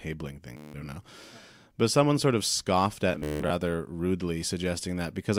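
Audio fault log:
0.57–0.74 s, Bluetooth stutter: packets arrive late or not at all, so the receiver keeps replaying its last short buffer. The result is a buzzing repeat, and 173 ms of speech is skipped when playback catches up.
3.13–3.50 s, Bluetooth stutter, right after "someone sort of scoffed": 280 ms is lost in bursts across 373 ms, with the longest run at 173 ms. Each gap is filled by a repeated slice.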